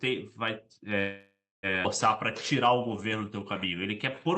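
A short speech recording passed through an Opus call path, with content ending at a clean 8 kHz cut-off on a spectrogram, shows three faults. From 0.99 to 1.66 s there is a call audio freeze. The last sound is stretched into a fading buzz that ends in about 280 ms of near-silence, and then speech resumes intact. The likely cause is late packets draining the jitter buffer. On a waveform this looks like a smooth decaying envelope, then a flat line. At 1.83 to 1.87 s a skip ahead removes roughly half a second of speech. The two sides are spliced with only a 12 ms bridge, so the sound jumps abruptly. A spectrogram shows an abrupt vertical seam where the formant patterns don't line up. From 2.18 to 4.29 s a jitter buffer slow-down repeats pitch periods and pause fragments, adding 228 ms, so the speech plays at 90% speed with unchanged pitch. A spectrogram shows stretched harmonics, and the waveform shows the same cycles repeated.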